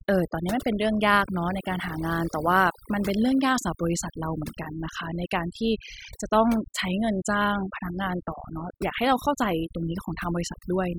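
Overdone noise removal runs throughout: an over-aggressive noise reducer gates bands near its noise estimate, leaving twinkling specks in near-silent background.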